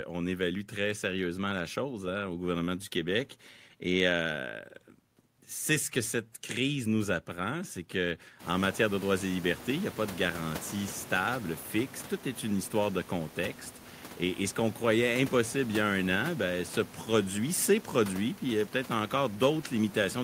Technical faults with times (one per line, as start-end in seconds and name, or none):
none